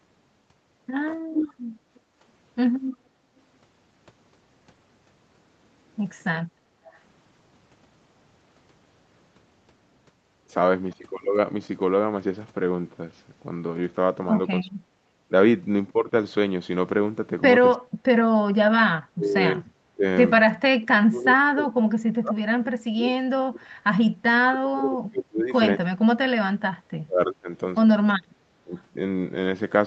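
From 1.32 to 2.0 s an echo leak is heard: a delayed copy of the sound, trailing by about 314 ms and nearly as loud as the original, most likely because the far side's echo canceller let loudspeaker pickup through. The fixed delay sets it apart from room reverberation. Between 1.55 and 3.29 s the background is gated by the echo canceller, with the room tone dipping by about 13 dB while the loudspeaker plays. It dips again from 6.46 to 6.82 s by about 11 dB. Unlike double-talk suppression, only the ambience drops, not the talker. A faint echo leak, far below the speech, returns from 6.91 to 7.0 s at the same 314 ms lag. From 14.63 to 14.94 s, and then in pieces across 17.76 to 28.72 s, the speech is suppressed in double talk. The talker's voice falls away steeply, likely because both sides spoke at once and the canceller could not separate them. These are losses of the main voice, not added copies. 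A last faint echo leak at the same 314 ms lag appears from 28.74 to 28.82 s.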